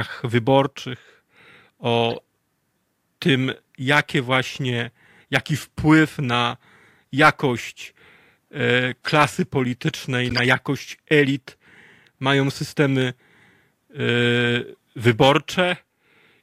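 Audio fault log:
2.10–2.20 s and 10.29–10.39 s, corrupt frame decoded: brief bursts of chirpy noise, each spanning a few codec frames, where damaged bitstream data was decoded as-is and misplaced spectral energy. The second, just before "jakość elit", is far louder, peaking around -5 dBFS.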